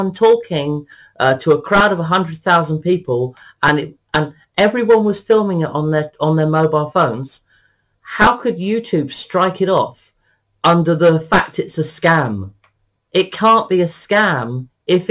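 Nothing in the signal stands out as a technical fault; level, continuity and frequency balance hold steady throughout the clip.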